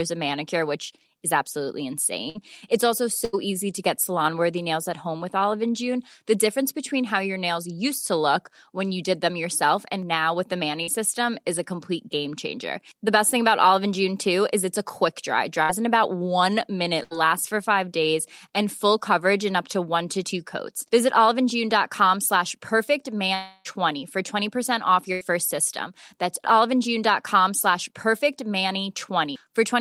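The speech in this recording breaks up at several points, and the breaks fall into three kinds that differ mainly in how long the receiver has to invent sound. The most frequent is a burst of packet loss, which occurs at 2.29 s (after "manicure which is absolutely"), 3.25 s, 15.63 s, 17.03 s (between "in about one" and "for five days and") and 25.13 s. At each of these points the last sound is stretched into a fading buzz or hiss lasting about 50 to 80 ms, and then the speech resumes with roughly 60 to 80 ms of material gone. This longer fill separates these from the short concealed packet loss at 10.83 s, between "and now with the" and "system is a complete". There only about 40 ms was patched, so the result is a brief smear or wobble rather than a sustained buzz. The longest break runs from 23.35 to 23.67 s. For about 0.3 s the last sound is drawn out into a decaying buzz or hiss and never reaches true silence, and when speech returns roughly 300 ms is missing. 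Its length, several times that of the bursts, points to a long network dropout as the likely cause.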